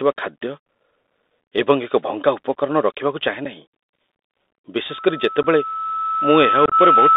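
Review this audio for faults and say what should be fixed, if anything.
The Bluetooth CVSD headset codec runs throughout. Everything sits between about 250 Hz and 3.7 kHz, with a granular hiss under the speech and scratchy s sounds. The one-bit delta modulation at 64 kbit/s can't track loud, fast high content. Plain narrowband filtering would sound band-limited but clean, without this grainy overload. Switching the headset to a wideband mSBC link, or using a wired microphone, avoids it.

Unconcealed Bluetooth headset packet loss cuts hard-edged silent holes at 3.45 s (7.5 ms), at 5.43–5.45 s (15 ms) and across 6.66–6.74 s, where 45 ms goes missing in pieces over 60 ms, the longest run being 22.5 ms. The shortest hole fits about one lost packet, and the last cluster points to several. Concealed loss would fill the gaps with smoothed or repeated sound, but here they are bare and come back briefly quieter. 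Keeping the headset close to the phone, away from Wi-Fi interference, prevents this.

A loudspeaker feedback squeal starts at 4.89 s and runs to the end. It is a single tone at 1.3 kHz that swells over roughly two seconds until it sits about 5 dB above the speech. A steady interfering tone would hold its level, but this one grows by itself, which shows the microphone is re-amplifying the loudspeaker at that frequency. Lowering monitor gain, moving the microphone out of the speaker's path, or notching 1.3 kHz prevents it.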